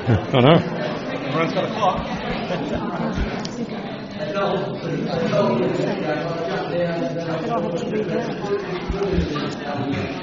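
No technical faults can be heard anywhere in the clip. Nothing breaks up, drops out or distorts at any point in the audio.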